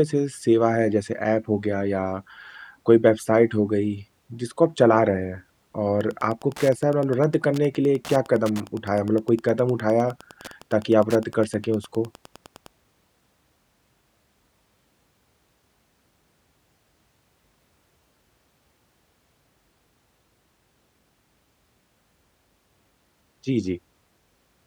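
Wi-Fi interference runs from 5.94 to 12.68 s. A nearby Wi-Fi radio's beacon, sent every 102.4 ms, gets rectified by the audio circuit, producing a steady ticking almost ten times a second that sits roughly 25 dB beneath the speech.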